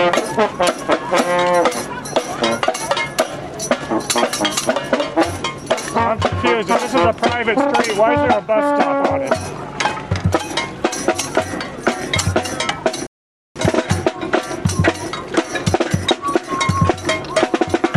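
At 13.07 s the sound stops dead for about 490 ms, a playback stall, likely the player starving for data or its thread blocking, before output resumes at 13.56 s.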